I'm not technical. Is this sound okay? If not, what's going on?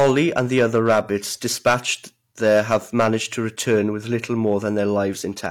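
No. All the way through the speech, the loudest moments crackle with a gritty edge. This is hard clipping. The sound was pushed louder than the recording stage could handle, so its highest peaks were sliced flat. Only a small fraction of the audio was affected, but each flattened peak adds that harsh crackle.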